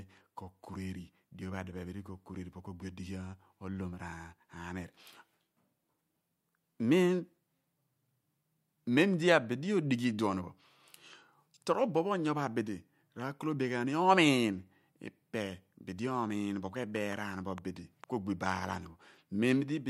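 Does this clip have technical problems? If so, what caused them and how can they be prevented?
Yes. A train of clicks runs from 16.96 to 18.05 s, starting after "dibi omiin bo ku" and ending before "ku ogbi bo aalan". Around four similar clicks arrive at uneven spacing, close to 2.8 per second, and peak a few dB above the speech. This is likely electrical interference from nearby equipment or a faulty connection or power supply. To prevent it, move or shield nearby devices and give the interface a stable connection and a clean power supply.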